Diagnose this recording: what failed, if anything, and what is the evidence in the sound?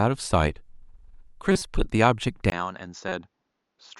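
Codec stage: corrupt frames decoded. A loud burst at 1.52 to 1.62 s, peaking around -5 dBFS, and a quieter blip at 3.09 to 3.12 s each span a few frames. Damaged bitstream data was decoded anyway, so misread gains and codes put energy at the wrong frequencies.

Input stage: from 2.5 s the audio drops out for 20 ms, then returns about 10 dB quieter, duller, with nothing above 7.2 kHz and a faint new noise floor well below the speech. The likely cause is the input switching to a poorer, narrower-band device.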